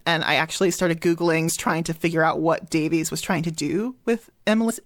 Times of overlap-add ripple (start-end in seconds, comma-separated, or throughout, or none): none